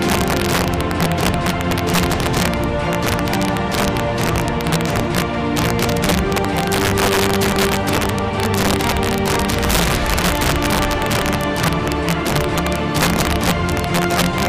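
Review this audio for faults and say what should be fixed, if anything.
Integer overflow runs throughout the clip: violent, sharp cracks land on the loudest moments, harsher than ordinary clipping. A gain or summing stage drives the signal about 4 dB past the largest value the integer format can hold, and instead of being held at the limit, those peaks wrap around to the opposite extreme, jumping across the full range in one sample. Only a small share of samples, around one or two percent, goes over, so the damage is confined to loud peaks. To prevent it, use saturating arithmetic or a limiter before conversion, and leave enough headroom that the gain stage cannot exceed full scale.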